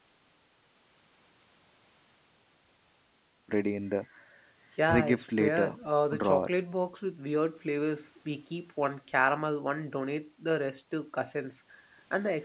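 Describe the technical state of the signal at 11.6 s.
At 11.6 s the speech is intact, with no dropout, glitch or distortion, only the narrow telephone-band sound of the call path, with nothing above 4 kHz.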